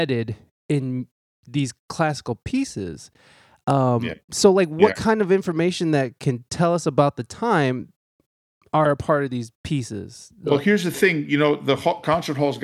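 No technical faults turn up anywhere in this speech recording.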